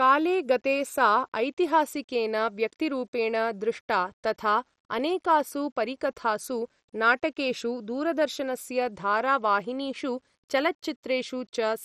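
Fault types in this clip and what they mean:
low bit depth without dither: The speech carries a grainy distortion that follows the signal, roughly 45 dB below it, roughening quiet syllables and decays. This is likely coarse rounding without dither, and the grit level fits a 10-bit word length.
MP2 compression: Heavy codec damage leaves the speech dull, with nothing above 14.6 kHz, upper bands flickering on and off, and a gurgling, granular texture in what remains. This is likely MPEG Layer II coding at a rate consistent with about 56 kbps.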